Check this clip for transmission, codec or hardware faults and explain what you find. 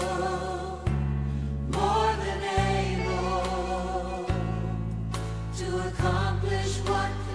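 Nothing stood out on listening that would point to a problem in transmission, encoding or the recording hardware.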